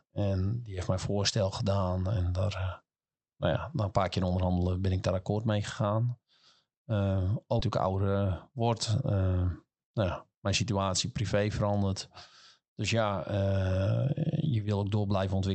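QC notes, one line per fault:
7.59–7.61 s, skip ahead: Playback jumps forward with no gap at all, and about a second of speech just vanishes. That stretch was dropped while later audio was already queued, so the two sides butt straight together and the cut feels abrupt.
7.69–8.54 s, jitter buffer speed-up: Right before "word nou ja mijn" the speech runs about 10% fast but keeps its pitch. It sounds a bit hurried because the receiver trimmed short pitch-period slices, about a tenth of a second in total, to drain its backlog.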